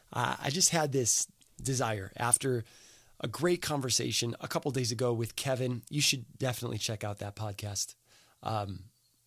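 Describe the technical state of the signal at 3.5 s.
At 3.5 s the speech signal is intact, with no audible dropout, clipping, glitch or other fault at that moment.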